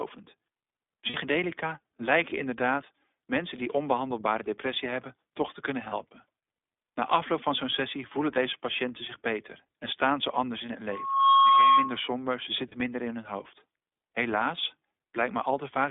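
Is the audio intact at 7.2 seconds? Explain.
No. At 7.2 s, as throughout, the speech passes through the iLBC codec. It codes each 20 ms frame independently, which fits its 15.2 kbps mode, and keeps only about 250 Hz to 3.6 kHz, so the sound is muffled, slightly rough and plainly synthetic.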